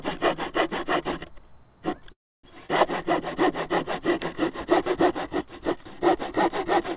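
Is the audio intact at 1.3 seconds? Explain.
Yes, at 1.3 seconds the sound is intact, with no dropout, glitch or distortion, only the narrow band of the WebRTC call path, which carries nothing above 4 kHz.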